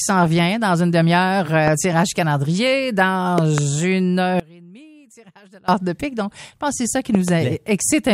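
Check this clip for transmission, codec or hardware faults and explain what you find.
Two kinds of fault are present: loud pops in three places and one dropout to a faint residue.

Loud pops occur at 1.68 to 1.70 s (a single pop), 3.38 to 3.60 s (two pops) and 7.15 to 7.30 s (two pops). Each peaks at about 15 dB above the sound, which continues underneath. The likely cause is a sudden voltage step or pulse, from a plug, switch, static or driver glitch, added to the signal. Later circuits shape it into a sharp thump.

An audio dropout to a faint residue runs from 4.40 to 5.68 s, lasting about 1.29 s. The sound cuts out abruptly and does not fade. In the gap only a faint leak of the sound remains, at about 25 dB below its normal level. The wanted signal was likely lost upstream while the path after the break stayed live. The sound then returns just as suddenly.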